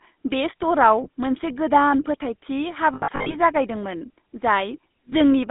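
GSM full-rate codec damage runs through all of this speech clip. The line is confined to roughly 200 Hz to 3.7 kHz, and the voice carries a plainly audible buzzy, gravelly roughness. The codec rebuilds speech from a vocal-tract model driven by sparse, regularly spaced pulses, which fits the 13 kbps full-rate scheme. Lost GSM frames cause brief rough, metallic stalls at 1.04–1.07 s and 5.10–5.13 s, where the decoder repeats the last good frame's settings instead of the missing audio. Between 2.94 and 3.36 s the losses are scattered, adding up to about 220 ms over that stretch, with no single gap much longer than 70 ms. The result is a stuttering, ringing patch rather than a fade to silence.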